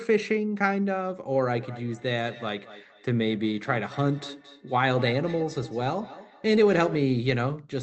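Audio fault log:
1.53–7.1 s, feedback echo between two devices: speech comes back as repeated copies roughly a fifth of a second apart, each thinner and more ringing, at loudest about 18 dB below the voice. Unlike room reverberation, the repeats are distinct and evenly spaced.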